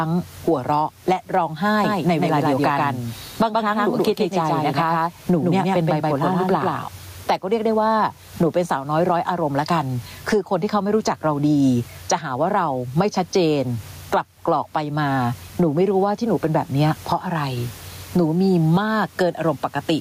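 Gain pumping runs through the whole speech clip: the gain rises in every pause, then drops by around 15 dB as each loud syllable arrives. Unlike a noise gate, which cuts the gaps, this lifts them. The likely cause is gain set far too high, with a fast limiter clamping it back.

From 1.84 to 6.88 s there is a doubled audio track: a second full-band copy of the speech trails by roughly 150 ms at about 5 dB lower, then stops abruptly. It has no decay or room colour, which sets it apart from echo or reverb. It likely comes from a slower capture path or an edit holding two copies out of step.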